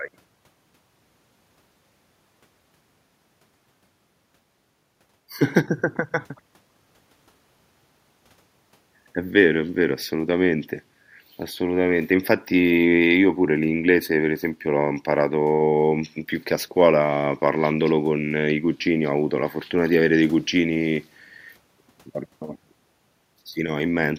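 Nothing in the speech here points to any technical fault, so there's nothing to flag at any point along the way.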